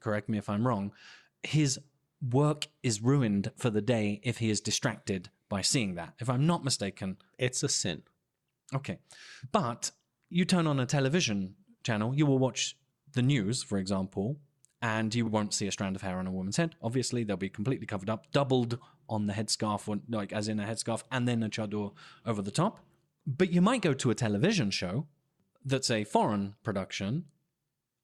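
Nothing technically wrong turns up anywhere in this bit of speech, so there's no problem here to point to.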